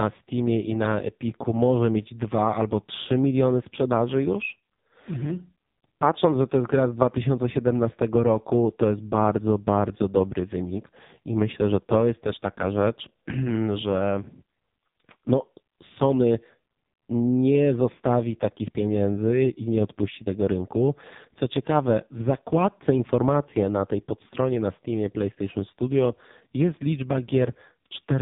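From start to finish the speech has AMR narrowband mobile codec damage: nothing above 3.8 kHz, and a heavy buzzy, synthetic quality that fits AMR-NB's lowest modes, around 5 kbps.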